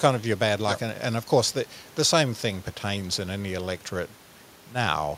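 A short piece of recorded speech, with no technical fault to be heard anywhere in it. Some background noise from the room sits underneath, about 28 dB below the speech, which is simply part of the recording.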